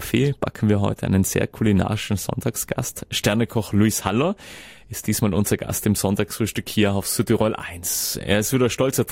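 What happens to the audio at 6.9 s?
Nothing goes wrong at 6.9 s: the audio carries on intact through that moment with no dropout, glitch or other audible fault.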